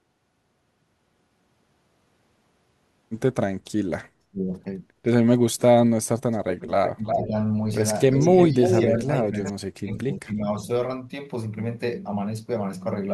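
Speech suppressed in double talk first cuts in at 4.31–4.44 s, a brief dip of about 25 dB, likely from an echo canceller turning down its own talker along with the loudspeaker echo. From 6.49 to 7.24 s an echo leak returns a copy of the speech 354 ms late at about 5 dB below it, likely residual loudspeaker pickup. Suppression overlaps it at 6.96–7.34 s, about 10 dB down. The echo recurs at 8.12–8.81 s, again 354 ms behind and about 5 dB down, with a shallow suppression of about 5 dB at 8.5–9.07 s. The deepest suppression, about 40 dB, runs from 9.24 to 10.62 s, and a faint echo at about 20 dB down appears within it at 9.38–9.52 s.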